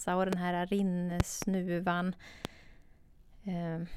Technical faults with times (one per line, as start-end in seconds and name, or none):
0.33-0.35 loud pop
1.20-1.45 loud pop
2.45-2.47 loud pop